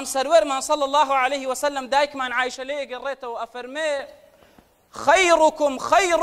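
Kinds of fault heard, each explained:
Sudden gain jump: At 2.55 s the sound and its background noise drop together by about 6 dB in a single step, and at 3.99 s they return just as abruptly to the earlier level. The change was likely a gain setting applied from one sample to the next with no ramp. Unlike a fade or compressor pumping, there is no gradual slope, and the noise floor shifts by the same amount as the sound.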